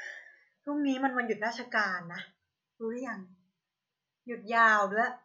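From 0.10 s to 5.17 s the speech carries clock slip clicks: faint ticks roughly every tenth of a second, about fifty in all, each a single sample dropped or repeated. The likely cause is two devices running on unsynchronised clocks about 200 ppm apart, so a whole sample of error builds up at that steady rate. Unlike random crackle or dropouts, the ticks keep an even, metronome-like spacing, sound clearest on loud sustained sounds, and vanish in pauses.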